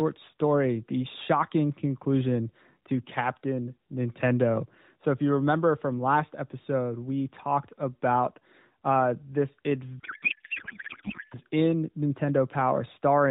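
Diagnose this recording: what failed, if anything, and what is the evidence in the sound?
From 9.99 to 11.39 s, just after "talked about uh this", the speech gives way to garbled noise and warble that barely follows it. This is a codec payload misread in the AMR narrowband path: octet-aligned frames were unpacked as bandwidth-efficient, scrambling every field the decoder read.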